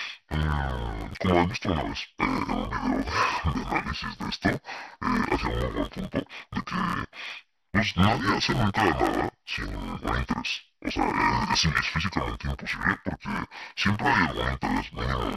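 Throughout, the speech sounds dull and robotic, with a buzz near 86 Hz: interleaved audio read as planar, in blocks of about 11.6 ms, which fits a 512-sample block.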